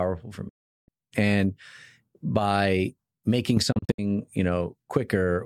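The speech fades out within 8 ms and stays silent from 0.49 to 0.89 s, then breaks into short holes from 3.72 to 3.99 s, just after "by making." This is a digital broadcast dropout: the receiver muted while frames were lost.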